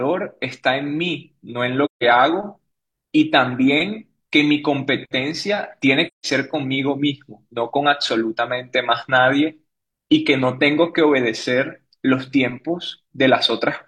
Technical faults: AAC frame loss with muting

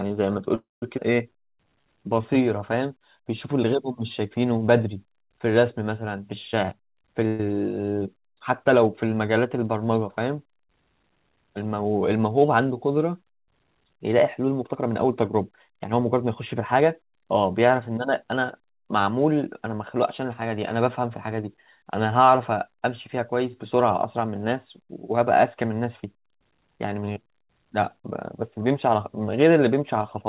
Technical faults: call audio freeze; skip ahead; jitter buffer slow-down; jitter buffer speed-up

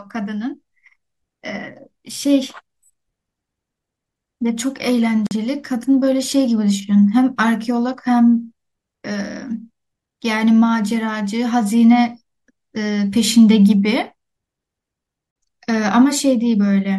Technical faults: gap at a join of encoded pieces

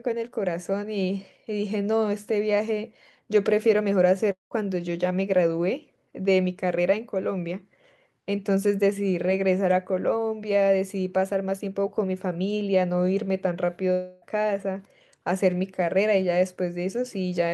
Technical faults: long network dropout

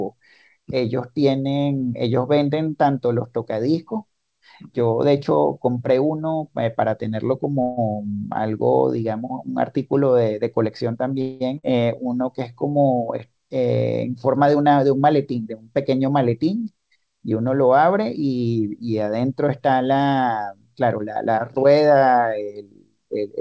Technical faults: call audio freeze; skip ahead; jitter buffer slow-down; jitter buffer speed-up

